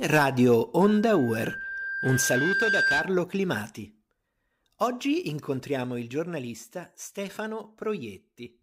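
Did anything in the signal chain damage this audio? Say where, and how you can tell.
Yes. Loudspeaker feedback squeal from 0.81 to 3.19 s, in the analogue acoustic loop between mic and speaker. A single 1.6 kHz tone swells over a couple of seconds until it sits a few dB above the speech, because the loop gain at that frequency exceeded one.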